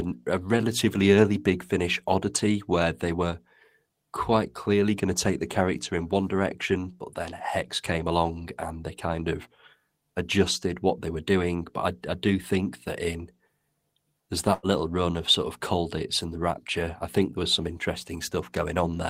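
Speech, with a burst of packet loss from 14.53 to 14.66 s, just before "little run of". Several packets went missing together. The receiver stretched the last sound for about 96 ms, fading it into a held buzz or hiss. Then about 60 ms of audio is simply gone.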